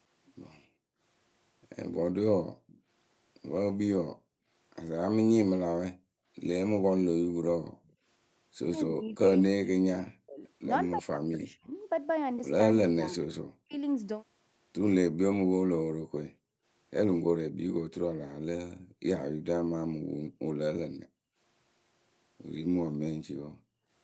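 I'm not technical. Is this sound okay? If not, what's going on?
No. The call's echo canceller is misbehaving in three ways.

Background gated by the echo canceller: while the far side's voice played through a loudspeaker, the canceller turned the microphone down hard. The room sound drops out, scattered between 0.65 and 8.05 s, then at 15.97 to 16.65 s, 18.32 to 21.38 s and 22.89 to 23.9 s.

Echo leak: the likely cause is a speakerphone whose canceller let some of its own playback slip back into the call. You hear a faint, delayed copy of the speech, trailing about a quarter of a second behind, at 2.67 to 2.81 s and again from 7.84 to 9.16 s.

Speech suppressed in double talk: from 8.85 to 13.77 s both sides were talking at once, and the likely cause is the canceller mistaking the talker for echo. The voice sinks away or cuts out in pieces, adding up to about two seconds.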